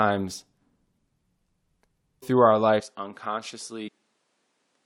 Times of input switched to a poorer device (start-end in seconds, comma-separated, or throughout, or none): 2.80-4.86